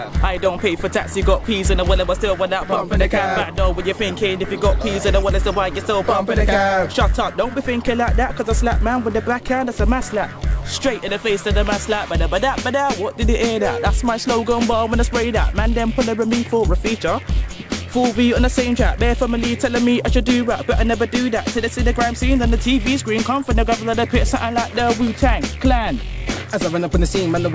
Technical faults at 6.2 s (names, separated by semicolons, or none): resampler restarted on every block